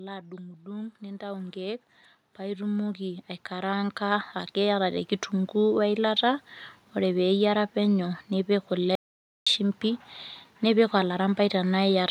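Speech, with two faults. From 0.62 to 5.19 s, automatic gain rising lifts voice and background together by about 16 dB, as the gain control slowly responds to a quiet input. At 8.95 s an audio dropout to silence begins. The sound cuts to silence for about 0.51 s, until 9.47 s, most likely because the input was lost while recording continued.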